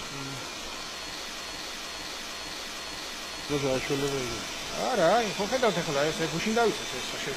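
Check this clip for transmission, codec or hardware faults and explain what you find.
One fault stands out, a broken-record loop from 1.40 to 3.50 s. The stream likely stalled and kept resending its last 0.46 s fragment, so that piece repeats exactly five times back to back and the intended audio there is lost.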